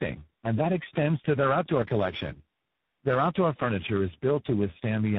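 Throughout, the speech shows tandem speech coding: it sounds passed through about four speech codecs in a row, each re-encoding the last one's damage. Unlike a single low-bitrate codec, the roughness, muffling and warble compound, layered over a band that stops near 3.8 kHz.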